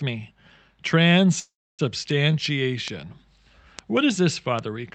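At 1.39 s the sound stops and resumes at 1.81 s. The last sound carries on briefly as a fading buzz, then about 290 ms of silence. It is a call audio freeze, likely from delayed packets draining the jitter buffer. Nothing is lost; a 394 ms pause is inserted.

Single sharp ticks follow at 2.11, 2.88, 3.79 and 4.59 s. These are bit error spikes. A flipped bit makes one sample jump and return, or two samples at 2.88 s. Each is a broadband click unrelated to the sound.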